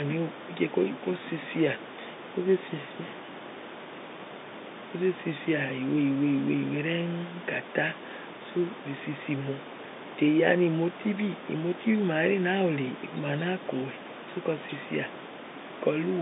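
Nothing's gone wrong here, it's just a speech recording heard over an ordinary telephone line, with some room noise sitting about 16 dB below the speech.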